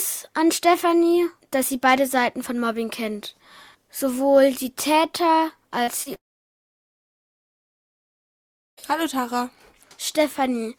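A run of short concealed packet loss begins at 5.83 s, with further gaps at 6.03 s and 6.14 s. Each loses only 20 to 40 ms of audio, which the receiver covers by extending the preceding sound before blending back in. The result is a brief smear or wobble with no audible gap, and that continuity is what separates these gaps from the dropout that follows. At 6.17 s the sound cuts out until 8.79 s, roughly 2.6 s, almost all of it silence after a short concealment tail. This is most likely a long network dropout: nothing arrived for that whole stretch, so the concealment faded out quickly, and the audio then resumes partway along without the missing section. The short gaps are only momentary blemishes, while this one is a clear hole in the audio.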